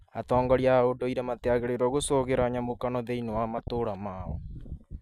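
A speech clip with two short bursts of DAB burbling: 2.01 to 2.09 s, between "a ũndũire matiagĩrĩirũo" and "nyamũkano thĩinĩ wa", and 3.58 to 3.68 s after "nyamũkano thĩinĩ wa". Weak reception let stray bit errors through error correction, corrupting samples so individual sub-bands got short blips of noise.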